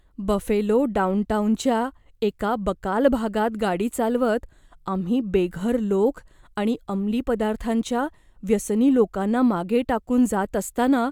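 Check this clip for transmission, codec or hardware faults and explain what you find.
Nothing in this speech recording points to any transmission, codec or hardware problem, so there's nothing to flag here.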